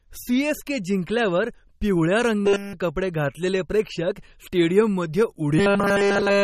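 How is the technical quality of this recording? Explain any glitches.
The technical quality is poor. Compression damage runs through the whole clip, and two passages turn robotic.

MP3 compression is plainly audible throughout. Nothing remains above 14.5 kHz. The encoder likely ran short of bits, which fits a low bitrate near 33 kbps. It dropped the treble and switched weak frequency lines on and off, so the speech sounds watery and smeared.

Robotic sound from repeated short buffers appears from 2.41 to 2.74 s, between "जिंकल्यावर पिवळ्या" and "कपडे घातलेले प्रेक्षक", and again from 5.59 s to the end. Nearly all the audio there is repeated short chunks. That imposes a rigid 200 Hz metallic buzz and likely points to 5 ms buffers.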